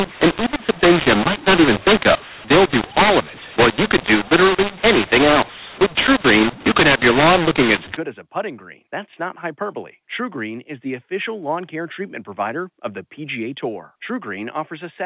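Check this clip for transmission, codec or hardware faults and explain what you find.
One fault is present, in the first half of the speech. From 0.0 to 7.97 s, just before "as a putting green", the audio has a mu-law and A-law mix-up. Samples written with A-law were expanded as mu-law, so levels are scrambled: some peaks swell, others shrink, and near-silent samples jump upward. Speech turns harsh. Pauses fill with hiss, which sets it apart from plain clipping. After that point the G.711 telephone band, capped near 4 kHz, sounds as expected.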